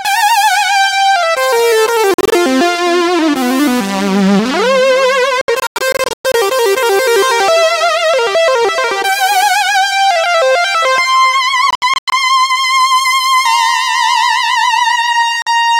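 Four bursts of silence, likely a Bluetooth dropout each time: 2.14 to 2.34 s, 5.41 to 6.35 s, 11.71 to 12.14 s, and 15.42 to 15.48 s. Each holds gaps up to 116 ms long, with abrupt or briefly faded edges, and the audio resuming further along as though it had kept playing.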